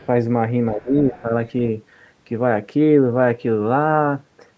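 Other side's voice leaking through, 0.03 to 0.07 s: a very faint scrap of a second voice, roughly 35 dB under the speech. It is most likely loudspeaker playback reaching the microphone that the echo canceller failed to subtract fully.

Speech suppressed in double talk, 0.73 to 1.31 s: the talker's level dips unevenly, by as much as about 15 dB, for around 0.4 s in total. The likely cause is the canceller hearing both sides at once, failing to tell its own talker from the echo, and attenuating everything.

Within that stretch the other side's voice leaking through returns at 0.86 to 0.93 s and 1.12 to 1.22 s. Both scraps are louder than the first, about 25 dB below the speech.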